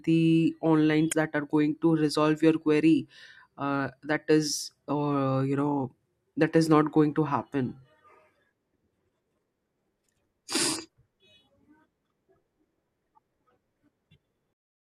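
Damaged data in the compressed speech stream corrupts frames at 1.09 to 1.13 s and again at 14.08 to 14.12 s. The decoder misreads them and loses sync while hunting for the next valid frame header, leaving a brief chirp or squawk each time.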